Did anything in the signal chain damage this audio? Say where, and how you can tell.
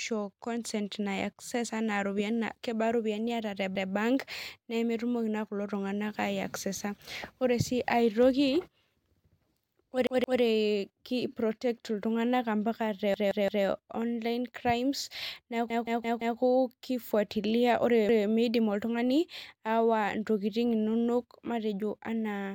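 Yes, a repeated buffer at the driver stage: stutters at 3.76, 10.07, 13.14, 15.70 and 18.09 s replay one 171 ms chunk up to four times, which fits a late 8192-sample buffer.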